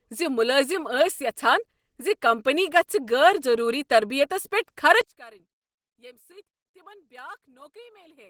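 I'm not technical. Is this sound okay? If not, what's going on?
No. The whole clip sounds muffled and hoarse. That is likely Opus compression, squeezed hard, which smears detail to save space.

From 5.01 s, right after "ضروٗری تربیتس پیٹھ", the voice suddenly drops to almost nothing. This points to one channel inverted, so the two sides cancel when combined.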